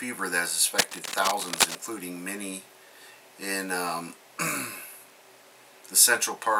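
From 0.78 s to 1.77 s, a burst of cable scratch noise rides over the sound for about a second, roughly as loud as the audio itself. It is dense, uneven scratching and rustling, most likely from a worn cable, connector or control being moved so its contact resistance jumps around. Unlike clipping distortion, it follows no peaks in the signal, and unlike a digital dropout, the audio never cuts out beneath it.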